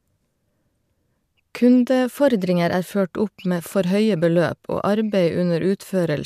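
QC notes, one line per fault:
2.21–2.87 s, drift correction step. The speech abruptly plays 5.9% faster and rises 99 cents, about a semitone, then snaps back to normal speed and pitch. This is likely clock-matching software changing the playback rate in one step to correct buffer drift.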